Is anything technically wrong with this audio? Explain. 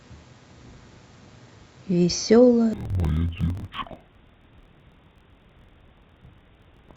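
Yes. From 2.73 s to the end of the clip, the speech suffers from interleaved audio being read as planar. Each 24 ms block holds alternating left and right samples, but the first half is treated as the left channel and the second half as the right. Each channel therefore gets half of the block and plays it at half speed, so the speech drops an octave (12 semitones) while keeping its normal pace. It sounds doubled and choppy.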